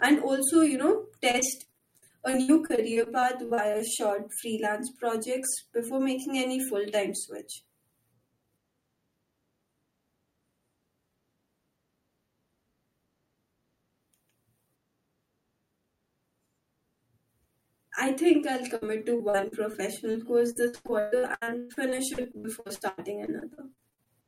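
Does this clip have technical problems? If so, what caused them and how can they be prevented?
Yes. Repeated packet loss (robotic sound) occurs from 1.31 to 3.82 s, 18.76 to 19.75 s, and 20.52 to 24.08 s. Lost packets were patched by stretching earlier sound, leaving choppy, robotic audio.

Short concealed packet loss occurs at 20.11 s. About 20 ms went missing and was filled with continued sound, leaving a brief smear.

A steadier network connection with enough jitter buffering and error protection would prevent these losses.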